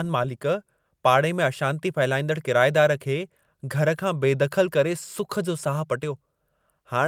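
No technical faults detected.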